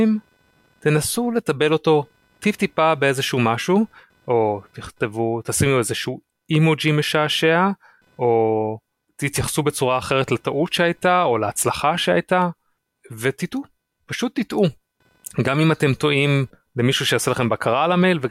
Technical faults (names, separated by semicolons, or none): computer activity noise